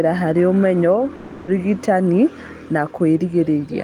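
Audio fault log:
1.15–1.49 s, long network dropout: just after "harĩ ũmenyo" the sound turns into a buzzy, fading continuation of itself for about 320 ms before normal audio resumes further on. This is likely a stretch of lost packets, with the receiver concealing the gap and the missing audio never played.
2.97 s, block of digital silence: a brief tick where the signal cuts out for about 0.73 ms, which fits a 32-sample block, and snaps back with no fade, so it is heard as a tick instead of an audible hole.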